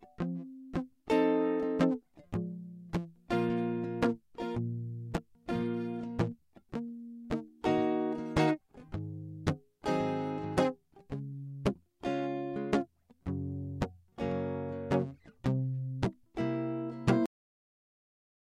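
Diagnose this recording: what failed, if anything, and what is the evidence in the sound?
The music stops dead at 17.26 s, mid-sound, and the remaining 1.3 s or so until the end are flat digital silence, with no decay or natural release. This is a cut-off end, a failure at the storage or buffer-writing stage. The final buffers of audio were never committed to the file, so whatever was still sounding is truncated abruptly instead of ending or fading, and the file simply carries silence to its end.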